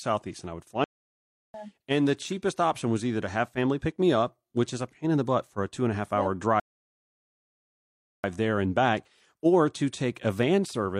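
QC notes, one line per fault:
0.84–1.54 s, playback stall: after "and I would fly" the speech halts for about 0.70 s and then carries on, likely because the player's output starved or its thread blocked. The waveform shows a flat gap, and the spectrogram a blank vertical band.
6.60–8.24 s, rebuffering stall: after "and a half hour" the audio drops to silence for 1.64 s and then resumes with "there and back" exactly where it stopped, waiting for more downloaded data. Nothing is lost. The waveform shows a flat line, and the spectrogram an empty column.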